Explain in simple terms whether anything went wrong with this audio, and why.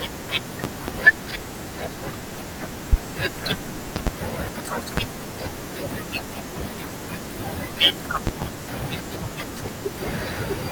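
Yes, something went wrong: the speech is interrupted by a series of loud pops. There are five bursts, at 0.64 s, 2.93 s, 3.96 s, 4.97 s and 8.27 s. The ones at 0.64, 3.96 and 8.27 s are double pops in quick succession, and the other two are single sharp clicks. They jump well above the level of the talking, which keeps going underneath. The likely cause is a sudden electrical jolt, such as a loose plug, a switch or static, getting into the signal.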